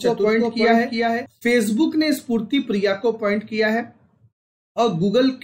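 From the start until 1.26 s, a doubled audio track is heard. A second full-band copy trails the original by about 400 ms, roughly 5 dB quieter, with no decay or room colour. It likely comes from a slower capture path. The copy cuts off abruptly.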